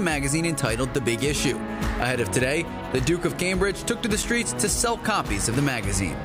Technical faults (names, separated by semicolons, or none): block of digital silence